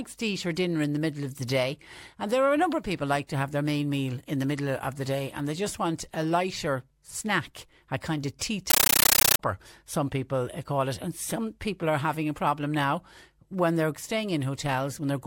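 At 8.70 s, right after "a kind of tea", the speech gives way to harsh, very loud chattering static until 9.39 s, where "some people eh call" resumes. This is a compressed stream played as audio: encoded Dolby Digital data was sent as if it were ordinary samples and never decoded. Bursts of about 13.3 ms repeat 31.25 times a second, which fits an AC-3 stream, likely at 640 kbps. On a waveform these appear as loud noise blocks separated by near-silent gaps, and on a spectrogram as broadband vertical bands from top to bottom.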